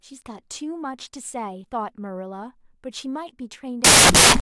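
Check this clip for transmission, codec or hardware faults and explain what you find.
One fault is present: samples built from the wrong bytes, from 3.84 s to the end of the speech at 4.50 s. For those last 0.66 s the reader assembles each sample from mismatched bytes, through a one-byte offset, swapped byte order or wrong alignment. The rapidly varying low-order bits end up as the dominant part of every value, so the speech gives way to loud, harsh broadband noise, close to white on the louder sounds.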